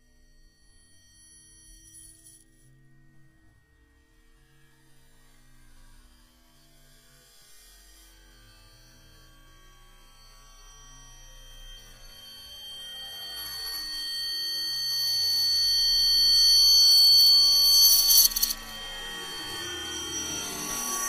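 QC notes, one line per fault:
No faults detected in this recording of sounds.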